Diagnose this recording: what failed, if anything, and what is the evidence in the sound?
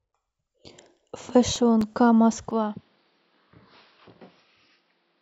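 Playback from disc. Six CD scratch ticks fall between 1.56 and 2.19 s. Each is only a few milliseconds long. The scratch corrupts more data per revolution than error correction can rebuild. The player then patches or mutes those samples, leaving brief clicks.

Input stage. At 2.51 s the sound turns duller and stays so. Nothing remains above 5.6 kHz, level drops about 5 dB, and a new noise floor sits roughly 40 dB down. There is no gap. The likely cause is an input switched to a poorer device.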